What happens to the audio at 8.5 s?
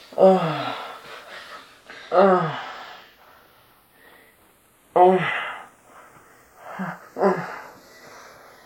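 At 8.5 s the channels are drifting apart, as they do throughout the clip. They run on clocks differing by roughly 20 ppm. By now the gap is about a fifth of a millisecond. Summed to mono, comb notches sweep slowly, heard as slow flanging.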